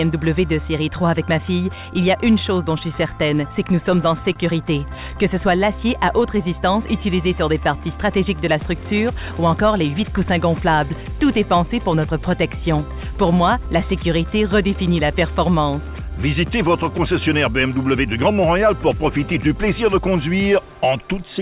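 The sender's audio clock runs about 2% slow relative to the receiver's. This clock drift between sender and receiver keeps the jitter buffer short of material, so playback is stretched as the receiver compensates. The audio arrives through a G.711 mu-law call path, which leaves nothing above 4 kHz. The drift is handled by repeated timing corrections from 0.47 s to 21.26 s. The receiver plays at about 98% speed and repeats small pieces, all in the same direction and unevenly spaced, adding roughly half a second in total. From 4.33 s to 4.39 s, a short stall from a late packet empties the buffer. The receiver holds the last sound for 26 ms until the packet arrives, then continues with nothing lost, leaving a brief held-over blip with a slight buzz or dip.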